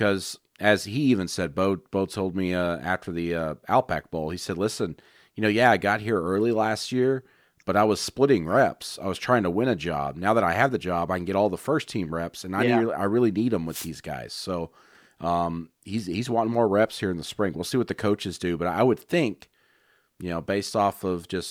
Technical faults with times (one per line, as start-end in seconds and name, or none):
13.68-13.90 wireless microphone noise hit